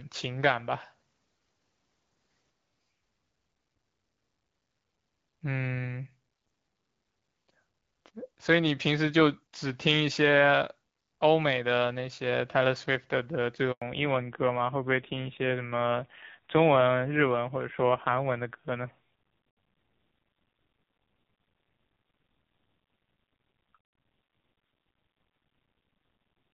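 At 13.72 s the speech cuts out for 100 ms, ending at 13.82 s, a handover gap. The call was being passed from one network link to another and no speech frames came through during the switch, so the sound fades out within a few tens of milliseconds and stays silent until the new link delivers audio. Whatever was spoken inside that 100 ms window is gone and cannot be recovered.

From 13.82 s to the end of the clip there is a fallback to narrowband. Before the gap the speech carries the clean, light coding of AMR-WB HD Voice, in line with a rate of 12.65 kbit/s. After it, nothing above 4 kHz remains, so the speech sounds muffled and dull. It also turns rougher and more buzzy, which points to a low-rate AMR narrowband mode around 5.9 kbit/s.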